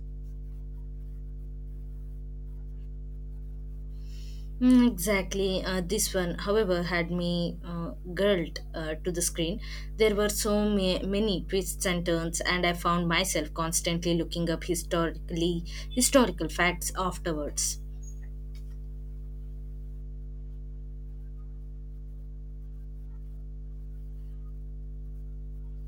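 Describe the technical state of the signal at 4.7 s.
At 4.7 s the signal carries mains hum, present continuously across the whole clip rather than at this moment alone. Power-line current is leaking into the signal path, most plausibly through a ground loop or a nearby transformer, and appears as a steady low tone at 50 Hz with some low harmonics. It sits only around 10 dB below the speech, so the drone is clearly audible under and between the spoken passages.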